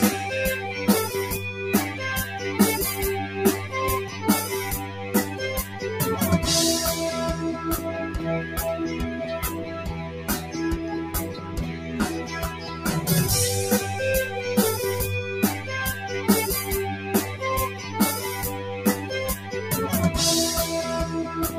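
A speech-style noise suppressor has been left on across the whole clip, so steady parts and tails keep getting treated as noise and pulled down while attacks slip through. The level swings by around 10 dB, which gives the audio a pumping, thinned-out feel.

You can hear the sound cut by the noise suppressor at 4.05–4.24, 4.85–5.01, 5.64–5.81, 9.68–10.54, 11.31–11.57, 11.73–11.92, 12.5–12.85 and 17.69–17.96 s. Each dip is about 5 to 7 dB, deepest in the long sag at 9.68–10.54 s, where sustained sound just sinks.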